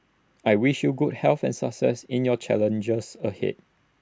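No technical faults occur at any point in the recording, so there is nothing to describe in time order.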